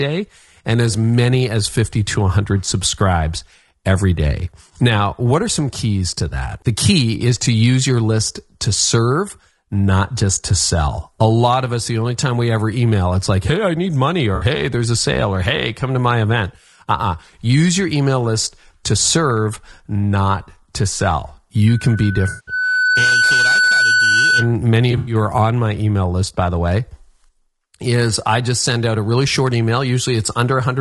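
A speech recording whose grainy, rough quality throughout, with noise between the harmonics and a thin, synthetic-sounding top band, most likely comes from low-delay AAC compression at a low bitrate (AAC-ELD at around 32 kbps). Short AAC-ELD frames resolve pitch harmonics poorly. AAC frame loss with concealment occurs three times, where the decoder patches over missing frames from the last good spectrum. After "hey I need money", 14.35 to 14.45 s (60 ms) sounds briefly smeared and noisy. A longer 180 ms hole at 22.29 to 22.52 s gives a phasey, blurred stretch. Before "are on my email", 24.91 to 25.15 s is scattered dropouts over about 160 ms. After "serve not to sell", loudspeaker feedback squeal runs from 21.68 to 24.55 s: the microphone re-amplifies its own loudspeaker at 1.5 kHz, a tone swelling over about a second and a half to about 5 dB above the voice.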